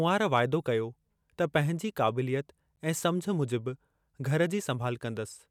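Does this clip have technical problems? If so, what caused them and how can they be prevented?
Yes. The speech was encoded in separate pieces and joined without trimming encoder delay and padding, leaving a gap at a join of encoded pieces: a 13 ms gap at 2.76 s with smeared edges. To prevent it, trim each piece's encoder delay and end padding before joining, or encode the whole recording in one pass.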